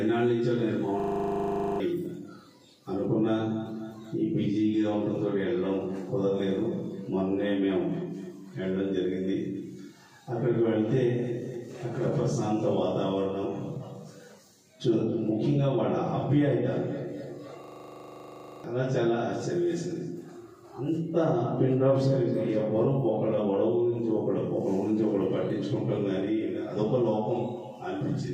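The audio has two system hang loops, from 1.0 to 1.8 s and from 17.64 to 18.64 s. Each time, a 40 ms fragment repeats exactly at 25 Hz, heard as a steady rasping buzz, which fits a 40 ms ring buffer replayed while the system froze. The audio that should have played then, about 0.7 s the first time and about 1 s the second, never returns. Packet-loss concealment would smear or vary the sound, but these repeats are identical.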